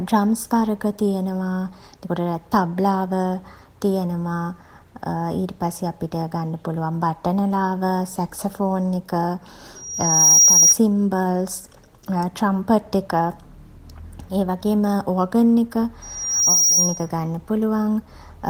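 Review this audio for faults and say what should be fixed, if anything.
Loudspeaker feedback squeal at 9.75 to 10.77 s and again at 16.02 to 17.09 s: a pure tone at 5.7 kHz swells over about half a second and sits above the speech, roughly 10 dB louder in the first burst and about 5 dB in the second. The microphone is hearing the loudspeaker it drives, and at 5.7 kHz the loop gain tops one, so that frequency feeds itself until the loop is broken. To prevent it, lower the monitor gain, move the microphone out of the loudspeaker's pattern, or notch out 5.7 kHz in the feed to that loudspeaker.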